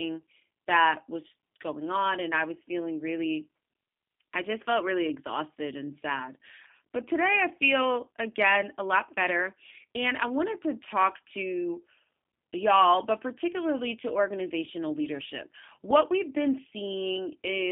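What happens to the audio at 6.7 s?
At 6.7 s the speech is passing through a G.729 codec, as it does for the whole clip. The codec rebuilds each 10 ms frame from a vocal tract filter, a pitch predictor and a few pulses, which fits a rate of about 8 kbit/s. Nothing above 3.5 kHz or below 150 Hz survives, so the speech sounds narrow, plainly rough and synthetic.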